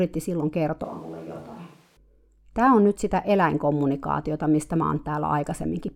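A switch to a distant microphone runs from 0.84 s to 1.97 s. The speech abruptly turns roomy and hollow, loses its low end, and drops by roughly 5 dB, while background noise rises to only about 25 dB below the speech. The cause is likely a failed or dropped close microphone, leaving a pickup further from the talker that hears more of the room. The return to the close sound at 1.97 s is just as sudden.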